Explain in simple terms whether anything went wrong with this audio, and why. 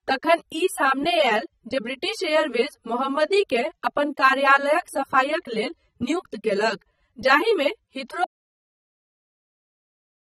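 Two things went wrong. The whole recording shows AAC compression damage. The speech sounds dull and smeared, with a fizzy, warbling edge on hiss-like sounds. Nothing is heard above about 15 kHz. This is likely from saving the file too small, which throws away detail.

Then there is an audio dropout to silence. At 8.24 s the sound stops dead and stays silent to the end. Even the room tone vanishes. The input was likely lost, so only silence was recorded, and that speech is gone.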